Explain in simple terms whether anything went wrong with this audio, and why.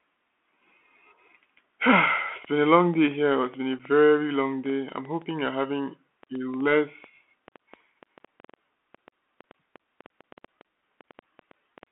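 Yes, three things went wrong, one lasting the whole recording and two at particular moments.

The whole clip has passed through a Bluetooth CVSD headset codec, the basic phone-call mode used by many wireless headsets. It only carries sound between roughly 250 Hz and 3.4 kHz, so the speech is thin and boxy, like an old phone line. The damage is plainly audible: s sounds turn scratchy and a grainy hiss sits under the voice. A simple low-quality phone line would sound narrow too, but it wouldn't have that gritty roughness.

From 2.45 s to 11.84 s a train of clicks runs over the speech, about 50 of them, averaging a little over five a second at uneven intervals. They are as loud as the speech itself, and they continue in the pauses, which shows they were added on top of the sound and aren't part of the voice. The likely cause is electrical interference or a struggling connection. Ordinary dropouts leave gaps instead of adding ticks.

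At 3.79 s there is unconcealed Bluetooth headset packet loss. A tiny piece of sound, about 7.5 milliseconds, went missing between the headset and the phone, and nothing was done to cover the hole. The result is a brief abrupt break with sharp edges. Unlike the steady run of clicks, this happens only once, and the sound is actually lost for that moment instead of being overlaid.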